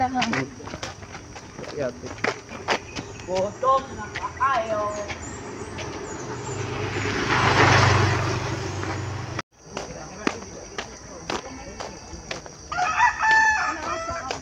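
No technical faults are audible.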